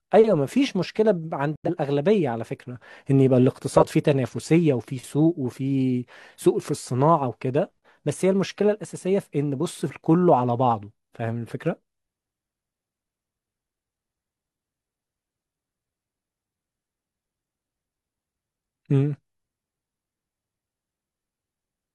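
Speech, with two separate compressed-frame faults. At 1.56 s the audio drops abruptly into silence until 1.70 s. This is a corrupt frame muted: the compressed data there was damaged badly enough that the decoder rejected it, and the player filled the gap with silence rather than guessing at the content. The 0.14 s hole starts with a hard edge, its length fits about two lost frames, and the speech resumes on its original timeline with no shift. From 3.76 s to 3.87 s a short burst of spurious, non-speech energy cuts across the signal, peaking at around -10 dBFS. This is a corrupt frame decoded: flipped bits in the compressed stream went undetected, so the decoder rebuilt the damaged frames from misread gain and spectral values. That put energy at the wrong frequencies, producing a squeak-like blip lasting roughly two frames.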